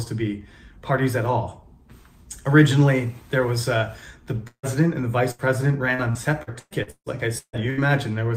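At 4.47 s the audio stops arriving until 4.66 s. The last sound is stretched into a fading buzz or hiss, then about 90 ms of near silence follows. Roughly 160 ms is lost. This is likely a long network dropout. From 5.31 to 5.42 s there is a burst of packet loss. About 80 ms goes missing. The receiver carries the last sound forward and lets it fade, and playback resumes past the hole. From 5.95 to 7.87 s, repeated packet loss gives a choppy sound with pieces missing. Packets keep dropping out in a string of short gaps, the longest about 155 ms. Each gap is patched by repeating the previous sound. Around a third of that stretch is filled in this way.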